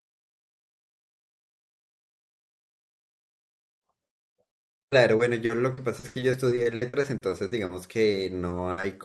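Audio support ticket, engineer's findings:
Repeated packet loss (robotic sound), 4.47–7.71 s: packets lost or late again and again through the jitter buffer, each hole patched by stretching the last audio. Speech turns choppy, about a fifth of the span concealed, gaps up to 80 ms. Same fault, 8.11–8.85 s: shorter burst, gaps up to 60 ms, similar robotic chop. Opus call path band-limited near 12 kHz.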